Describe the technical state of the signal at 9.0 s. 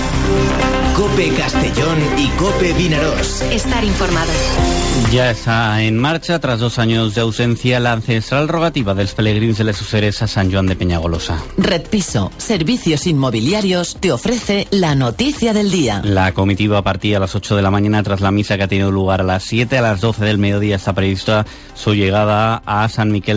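At 9.0 s the signal is intact, carried through a WebRTC call path whose band stops at 8 kHz, which fits a wideband G.722 codec.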